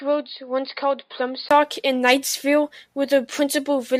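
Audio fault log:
0.00 to 1.51 s, input switched to a poorer device: the opening section was likely captured through a lesser input before the system moved to the main microphone. That device passes nothing above 5 kHz, so the speech sounds dull and boxy, sits roughly 5 dB quieter, and carries its own faint background noise a long way below the speech. At 1.51 s a 20 ms gap marks the changeover, after which the sound opens up and brightens.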